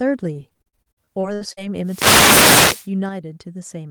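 From 0.33 to 1.59 s the speech turns choppy and robotic: repeated packet loss, around a dozen holes up to 70 ms long, about a third of the stretch patched by extending the previous sound. Unlike a single dropout, the gaps recur rapidly, giving a choppy stutter.

Between 1.83 and 2.89 s a wireless microphone noise hit appears as a swish of static rising over the speech as the radio signal fades. It is hiss layered on top, not missing or repeated audio, which separates it from the packet loss.

At 3.09 s the speech and its background noise drop together by about 4 dB and stay lower to the end. This sudden gain jump happens between one sample and the next, likely a gain setting applied without a ramp. A fade would slope, and this does not.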